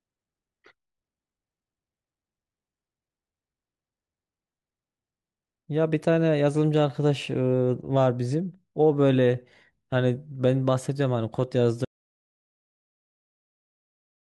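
At 11.85 s the speech cuts abruptly into an audio dropout to silence until the end, likely lost input; no room tone remains, unlike gating.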